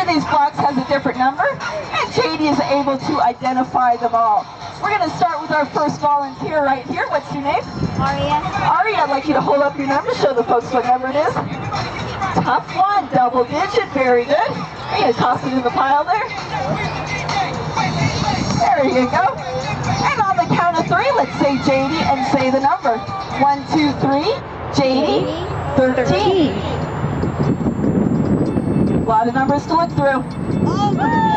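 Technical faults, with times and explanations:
25.10 to 31.37 s, switching supply whistle: a power supply's switching runs in audible burst mode or beats with another supply, leaving a high whistle around 7 kHz, wandering between 6.77 and 8.21 kHz, roughly 40 dB below the signal.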